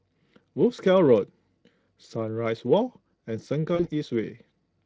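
At 3.75 s, VoIP packet loss concealed by the speech codec: about 40 ms of audio went missing, which fits two lost 20 ms frames. The decoder filled the gap by extending the last pitch and spectral shape at falling gain, so the speech smears into a fading buzzy tone or coloured noise rather than dropping to silence or clicking. Recovery continues to about 3.89 s as the decoder rebuilds its state.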